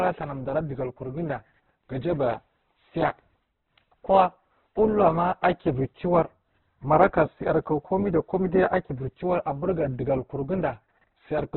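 Heavy Opus compression, likely at a very low rate around 8 kbps in its music-style CELT mode, runs through the whole recording. The band is cut so that nothing survives above 7.6 kHz, and the speech sounds dull, rough and grainy, with noise-like texture replacing clean tone.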